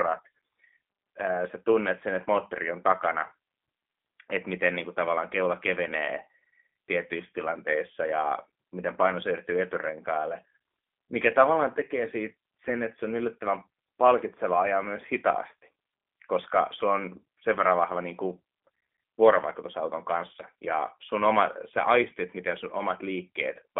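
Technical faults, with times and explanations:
Throughout, G.729 codec: the speech sounds thin, slightly rough and synthetic. Nothing above about 3.7 kHz comes through, and the band sits roughly between 250 Hz and 3.5 kHz. This damage fits a low-rate VoIP coder near 8 kbit/s. It does not send the waveform itself. It sends a vocal tract filter, a pitch predictor and a few pulses per short frame, and then rebuilds an approximation of the sound.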